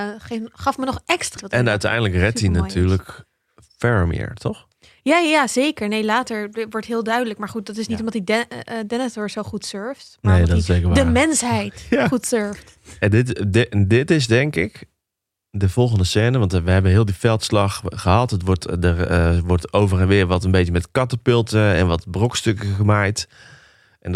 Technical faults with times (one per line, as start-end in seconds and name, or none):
1.37-1.41 stream segment skipped